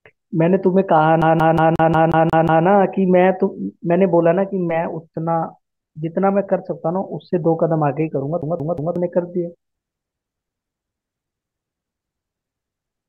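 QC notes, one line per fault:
1.22–2.66 s and 8.42–8.96 s, CD stuck on one turn: the same 0.18 s slice of speech repeats eight times in the first run and three in the second, each jump marked by a brief mute as the laser is thrown back a track at a scratch. Like a digital buffer loop, the stutter is even at one repeat per 0.18 s, but with that small gap at every return.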